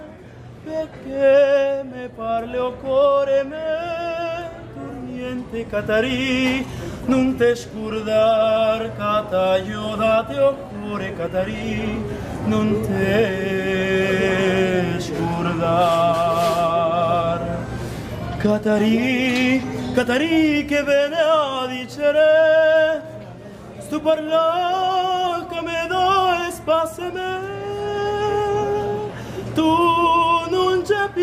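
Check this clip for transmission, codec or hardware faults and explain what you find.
Nothing in the transmission, the coding or the playback chain stands out to the ear anywhere in the clip.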